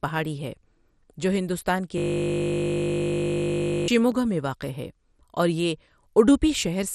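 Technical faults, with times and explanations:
throughout: MP2 compression, likely from a low-rate MPEG Layer II encode. Too few bits forced upper sub-bands off and the rest coarsely quantised, so the speech sounds dull and gurgling, with nothing above 14.3 kHz, which fits a bitrate around 64 kbps.
1.98–3.88 s: system hang loop. The computer or driver stalled while the sound hardware kept replaying one 20 ms buffer, so the speech becomes a steady buzz at 50 Hz, and roughly two seconds of real audio are lost.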